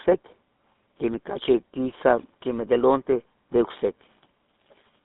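GSM full-rate codec damage runs throughout the speech. The codec models the vocal tract and drives it with a coarse pulse excitation that keeps only every third sample, so voices turn buzzy and gravelly. The band stops at 150 Hz and 3.7 kHz, consistent with 13 kbps full-rate coding.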